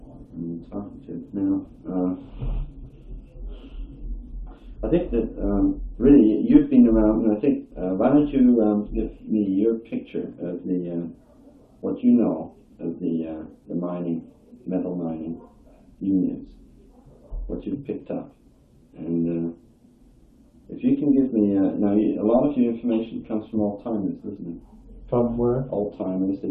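No faults detected anywhere in the recording.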